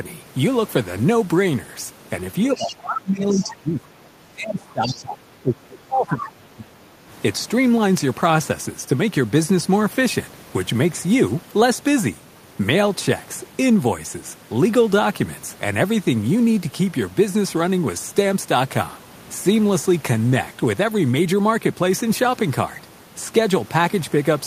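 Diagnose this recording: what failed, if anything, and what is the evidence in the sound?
Between 2.54 and 6.97 s the speech is repeatedly pulled down, by up to about 20 dB and roughly four seconds in total, in uneven patches rather than one steady fade. This is speech suppressed in double talk, likely caused by the call-processing echo canceller ducking the talker while both sides spoke. The patchy dips during overlap distinguish it from a gain or level fault.

The other side's voice is leaking through in short scraps at 2.56–2.76, 3.3–3.47 and 4.87–4.98 s, about 15 dB below the main speech. These brief fragments sit inside the suppressed stretch, not a full delayed copy as ordinary echo would give. They are likely loudspeaker pickup that the echo canceller left behind.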